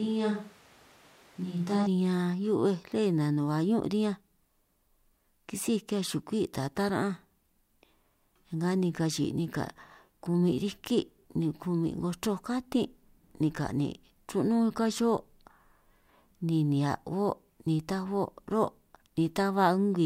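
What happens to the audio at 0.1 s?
The close microphone's signal has likely dropped out, leaving a more distant microphone carrying the speech from the start until 1.86 s. That switch to a distant microphone makes the voice roomy, hollow and thin in the bass at a similar level, with room noise about 30 dB below it.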